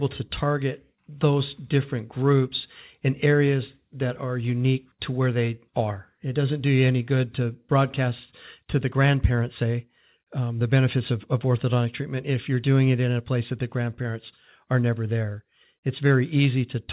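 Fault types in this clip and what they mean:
No faults are present: the speech comes through a normally working call path, with nothing above 4 kHz and a narrowband character that fits G.711 mu-law coding.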